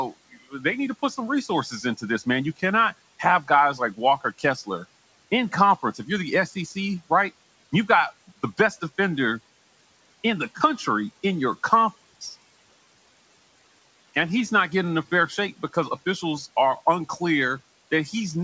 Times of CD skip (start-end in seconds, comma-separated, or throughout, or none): none